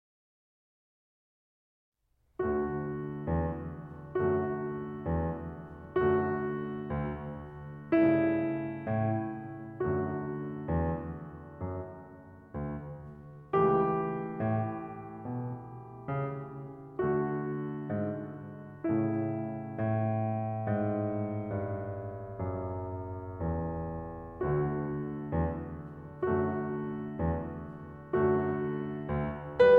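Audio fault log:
Nothing stood out on listening to this music clip.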